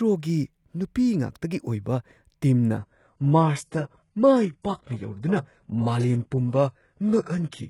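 At 2.78 s the speech drops abruptly to an adaptive stream at a lower bitrate, holding to the end with no gap. Treble above 11.5 kHz vanishes, which fits a switch from a high-rate AAC stream to a very low-rate HE-AAC rendition.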